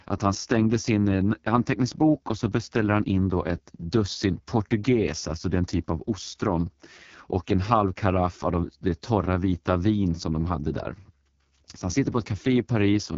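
Throughout the speech, an AMR wideband (HD Voice) codec at its lowest rate leaves everything rough and raspy, which fits about 6.6 kbit/s. Unlike narrowband telephone coding, content extends to 7.2 kHz, but the top band is hissy synthesized noise rather than real detail.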